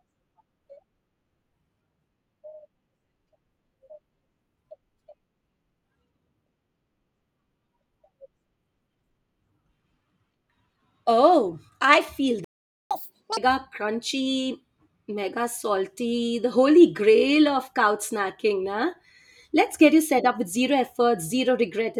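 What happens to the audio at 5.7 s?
Nothing goes wrong at 5.7 s; the speech plays through that moment intact, with no dropout, click, distortion or other fault to be heard.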